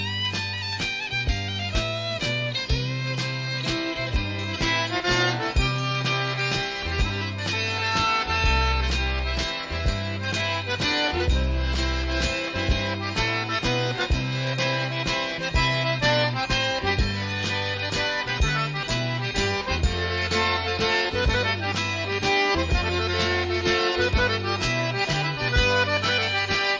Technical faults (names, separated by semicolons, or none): none